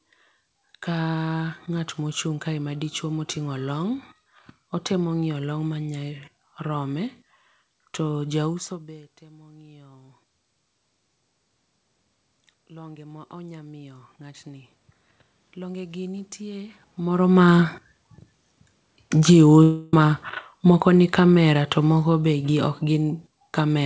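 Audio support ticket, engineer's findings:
Automatic gain rising, 9.19 to 10.24 s. Level climbs about 5 dB over roughly a second, voice and room noise lifting together. Input had just dropped about 24 dB around 8.5 s as the talker moved away. The AGC sensed a quiet signal and ramped its gain slowly. Second automatic gain rising, 12.45 to 16.85 s. Slower, longer swell of about 9 dB. Same component. Background noise floor rises with the speech, so the talker did not get closer.

Automatic gain falling, 19.14 s to end of clip. Sound starts loud, then sinks steadily with its background. The AGC judged the input too hot or its background noise too strong and pulled its gain down gradually. Background falls in step with the voice, so this is gain processing. It is not the talker.

Long network dropout, 19.63 to 19.94 s. About 0.3 s of audio never arrived. The gap is filled with a fading buzz or hiss continuing the last sound, with no true silence. 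Playback resumes afterwards without the lost stretch. This is likely a network fault. Receiver-side concealment in the G.722 call path is papering over missing packets. No energy is heard above 8 kHz, consistent with that codec's band limit.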